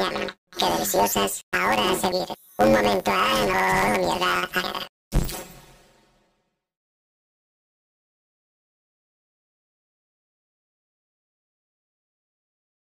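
From the start to the end, the audio has a planar-read-as-interleaved fault. Each block holds all its left samples and then all its right samples, but the player takes them as alternating pairs. So each block plays twice at double speed, left then right. Here the blocks are only 10.88 ms long. That gives a robotic buzz at about 92 Hz, the block rate. No clear octave shift comes through.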